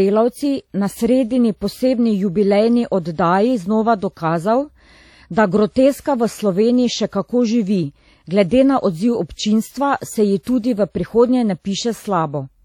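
Throughout the speech, a transform codec has likely discarded detail, and the damage fits WMA compression at a bitrate around 48 kbps. Quantisation noise smears across long blocks, giving a ringing, washy texture and hiss that swells with the voice, with nothing above 17.7 kHz.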